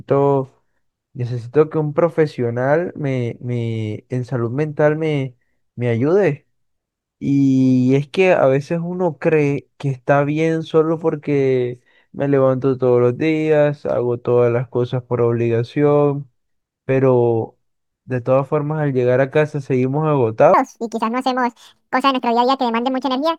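From 20.54 s to the end the speech jumps to 1.84 times speed, about ten semitones higher: a section at the wrong speed, likely from a clock mismatch.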